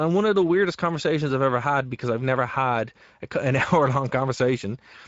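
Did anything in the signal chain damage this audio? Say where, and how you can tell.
Yes. Throughout the speech there is a hoarse, noisy graininess, and nothing above about 7.7 kHz. That is the Speex codec, whose CELP coding leaves the excitation too few bits at a middle quality setting, consistent with roughly 17 kbps, so the upper band becomes shaped noise.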